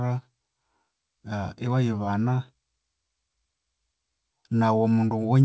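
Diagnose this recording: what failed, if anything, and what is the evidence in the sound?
Nothing failed: the speech shows no defect at any stage, and its band stops at 8 kHz, as expected from a wideband call path that fits G.722.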